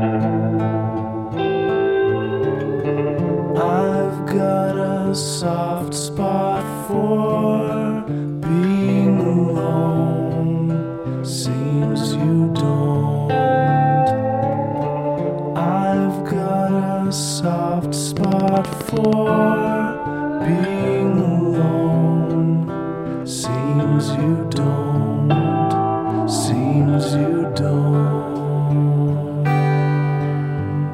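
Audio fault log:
18.17–19.14 s, train of clicks: about a dozen near-identical clicks per second, regularly spaced, roughly fifteen in all, standing up to about 10 dB above the signal. Their repeating uniform shape points to a likely source in nearby interference or a struggling interface injecting pulses.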